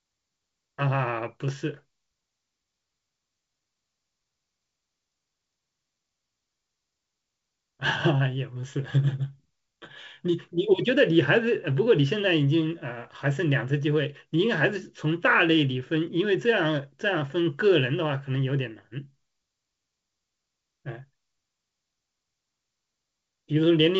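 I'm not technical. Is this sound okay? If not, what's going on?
Yes, no faults here.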